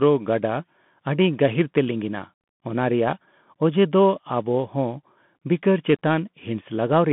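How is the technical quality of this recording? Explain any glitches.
Pretty rough, honestly: the whole thing sounds like it came through a Bluetooth headset link. Throughout the clip it's the Bluetooth CVSD headset codec at work. The speech sits in a narrow band of roughly 150 Hz to 3.5 kHz, with nothing above 3.8 kHz. CVSD sends a single up-or-down bit per sample with an adapting step size, which fits a 64 kbps stream. When the speech gets loud and bright, the step can't keep pace, so s sounds come out scratchy and a grainy hiss runs under everything.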